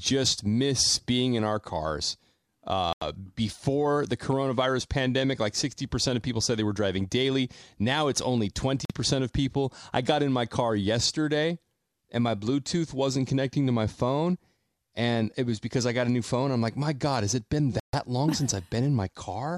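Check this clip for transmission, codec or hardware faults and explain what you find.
Three short dropouts interrupt the speech, at 2.93–3.02 s, 8.85–8.95 s and 17.80–17.96 s, each cutting to silence for 86 ms, 46 ms and 137 ms respectively before the sound resumes. These are likely Bluetooth stalls: radio interference delayed packets, the receiver's buffer emptied, and playback halted until retransmitted data arrived. That gives the abrupt gap-and-restart character, with the speech picking up again rather than fading.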